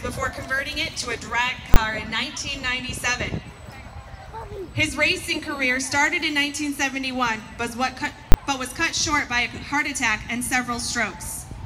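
Invalid numbers at full scale strike at 1.74 to 1.76 s and 8.32 to 8.34 s: infinite or invalid values pin each 20 ms block at one extreme value, far beyond the audio's peaks, heard as a single sharp bang.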